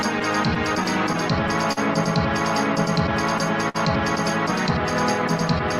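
Throughout, clock drift between sender and receiver, with the sender running roughly 3 percent slow, drains the jitter buffer. Repeated slivers and brief hiccups recur at uneven intervals, showing as small discontinuities in the waveform.

From 0.19 to 1.79 s, scattered short gaps, about seven of them, are patched with roughly 100 ms of continued sound, none longer than about 40 ms. They cause ticks and smears, visible as smeared vertical slices on a spectrogram.

From 3.69 to 3.76 s, a short stall from a late packet holds the last sound for 57 ms until it arrives, causing a slight buzzy drag. On a spectrogram this shows as flat horizontal streaks.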